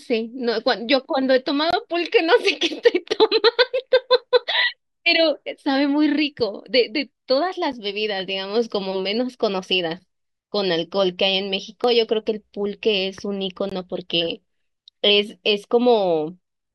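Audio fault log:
1.71–1.73 s, 7.72 s, 13.69–13.72 s: gap between stream segments. The time stamps of consecutive 6-second segments do not meet, so the player pads each join with silence, adding about 22 ms, 8 ms and 20 ms. The speech stops dead for that moment and resumes with hard edges, and the holes recur at roughly 6-second spacing, one per segment boundary. Nothing is removed; the audio is only stretched slightly at each join.
11.84 s: dropped buffer (overrun). This is likely a capture overrun, where samples were overwritten before being read, so a stretch of about 20 ms disappeared and the audio on either side was butted together. No silence fills the join. It shows as an abrupt forward jump in the speech, as if a tiny slice were snipped out.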